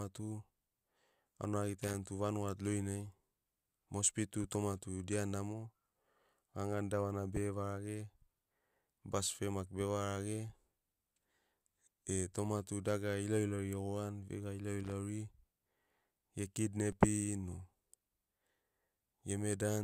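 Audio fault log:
1.83–1.94 s and 14.80–14.92 s, loose connector crackle: two short scratchy bursts, each a bit over a tenth of a second, where a worn or dirty contact is flickering open and shut, chopping up the speech and throwing little pops off any DC on the line.
16.92 s, DC step: a soft low thump as the waveform's zero line suddenly jumps by about -44 dBFS. The offset then drains away through a 20 Hz high-pass, so you hear just the one knock while the speech carries on over it.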